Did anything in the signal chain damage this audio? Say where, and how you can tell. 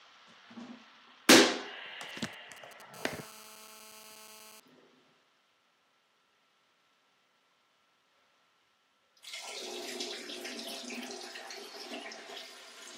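Yes, GSM signalling bursts leak into the analogue wiring from 2.09 to 2.82 s: galloping ticks and brief 217 Hz buzzes, roughly 20 dB down, from rectified phone bursts.

Then GSM phone buzz, 2.94 to 4.6 s: a steady, raspy 217 Hz buzz about 18 dB below the sound, as an in-call phone's pulses get rectified.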